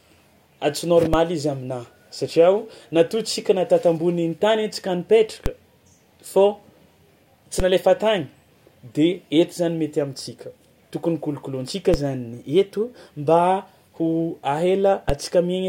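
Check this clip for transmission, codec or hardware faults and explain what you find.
The clip has one kind of fault, a DC step, occurring five times, at 1.14, 5.46, 7.60, 11.94 and 15.10 s. Each is a low thump under the continuing speech, caused by the waveform's zero line jumping by about −9 dBFS (about −8 dBFS at 15.10 s) and then decaying back through a 20 Hz high-pass.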